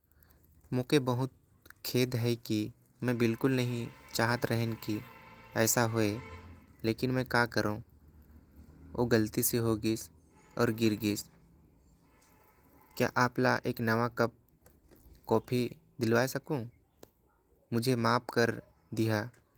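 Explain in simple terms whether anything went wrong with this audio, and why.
Nothing went wrong that I could hear: on listening to this speech recording, nothing stood out as a problem.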